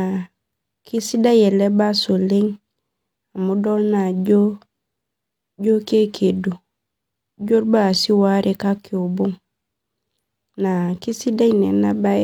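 No technical faults can be heard anywhere in the recording.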